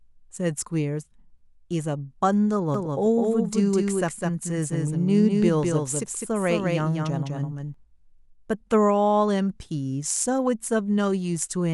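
Speech, with a doubled audio track from 2.74 s to 7.74 s: a second full-band copy runs about a fifth of a second behind the original and sits a few decibels below it. It has no decay or room colouring, and it cuts in and out abruptly at those two times. The likely cause is a second capture of the same signal through a slower path, or an edit holding two misaligned copies.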